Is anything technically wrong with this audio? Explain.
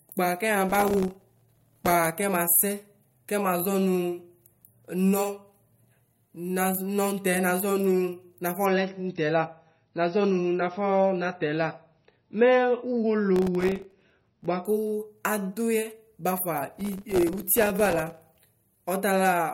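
Yes. The speech has two kinds of technical fault, and they overlap near the end of one stretch.

Processor overload crackle occurs from 0.70 to 1.92 s, from 13.36 to 14.46 s, and from 16.72 to 18.33 s. The system could not finish its very short audio buffers on time, each around a millisecond and a half, and it missed many deadlines in a row. Each missed buffer became a brief hole of silence with hard edges. Tens of these holes, sometimes about a hundred, blur into a gritty, tearing crackle over the voice. On a waveform the signal is chopped by dense, tiny flat gaps. A spectrogram shows thin vertical broadband streaks across those spans.

Adaptive stream at a lower bitrate runs from 8.65 to 14.65 s. The connection slowed, so playback switched to a much leaner encoding of the same stream. The change fits a drop from a moderate MP3 rate to a very low one. The speech abruptly loses its treble and takes on a swirly, metallic codec texture, but there is no gap at either switch. 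A spectrogram shows a hard ceiling at 5.9 kHz with nothing above it for those six seconds, and full bandwidth returns just as suddenly.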